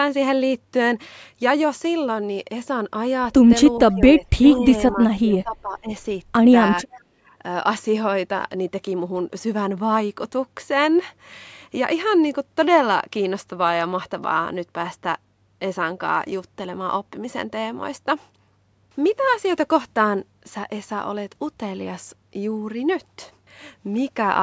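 A speech clip with echo-canceller trouble during a call. Speech suppressed in double talk pulls the voice down at 3.94–4.23 s, 4.4–4.67 s, 4.92–5.02 s and 5.21–5.9 s, by roughly 5, 10, 10 and 15 dB. This is likely the canceller ducking the voice while both sides talk, and it shows as notches in the waveform envelope. An echo leak appears at 4.09–4.13 s and 4.51–4.55 s: faint scraps roughly 30 dB below the voice, trailing it by 427 ms. They are likely residual loudspeaker echo the canceller missed, seen as weak repeated spectral patterns. Background gated by the echo canceller drops the room sound by about 17 dB at 7.14–7.33 s, leaving a brief dark gap in the spectrogram's noise floor.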